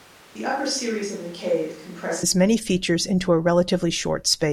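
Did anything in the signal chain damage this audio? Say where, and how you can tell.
Yes. From the start to 2.23 s the speech sounds roomy, thin and about 5 dB quieter, with audible room noise. It then snaps to close and dry, likely a switch to a distant microphone at capture rather than added reverb or a gain drop.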